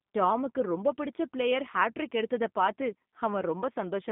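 Throughout the clip, G.729 codec damage is plainly audible. The speech is rebuilt from a vocal tract model and sparse pulses, so it sounds rough and synthetic, which fits 8 kbit/s G.729A. A spectrogram shows energy confined to 150 Hz–3.6 kHz, with nothing above 3.7 kHz.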